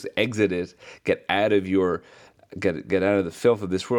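Nothing goes wrong anywhere in this short speech recording; there's no technical fault to point to at any moment.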